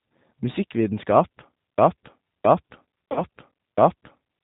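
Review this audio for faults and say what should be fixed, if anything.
A G.729-family speech codec runs through the whole clip, and the sound fits an 8 kbit/s G.729A stream. The encoder discards everything above 4 kHz and rebuilds each 10 ms frame from a vocal-tract filter, a pitch predictor and a handful of pulses. The damage is plainly audible: the speech is dull and band-limited, with a rough, synthetic edge where the sparse pulse excitation replaces the natural waveform. Preventing it means carrying the call on a wideband codec, or at a higher bitrate, wherever the link allows.

From 1.78 s to the end, the broken-record loop appears. Something upstream most likely stalled, either the player, the encoder or the stream, and kept resending the last fragment it held. The result is a segment of about 0.67 s repeating exactly, back to back, roughly four times until the clip ends. The audio that should have followed 1.78 s is missing entirely. 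Preventing it means having the stream watchdog detect a stalled buffer and flush it or signal silence instead of replaying stale data.

At 3.12 to 3.23 s, within the looped section, there is VoIP packet loss concealed by the speech codec. About 40 ms of data went missing, which points to two lost packets. The decoder filled the gap by extrapolating its last pitch and filter state with falling gain, so the sound smears into a fading buzzy tone or coloured noise. Because each frame builds on the previous one, it stays weak or distorted briefly after 3.23 s. Preventing it means adding a jitter buffer with forward error correction or redundant packets on the network path.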